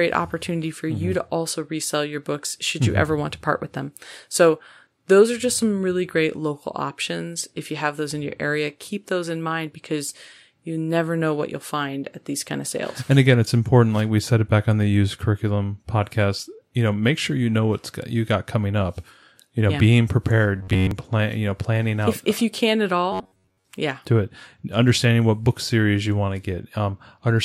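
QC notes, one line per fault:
20.56–20.91 s and 23.12–23.67 s: robotic sound from repeated short buffers. The speech becomes a rigid metallic buzz at 93.8 Hz, likely from an 11 ms slice replayed while most incoming audio is skipped.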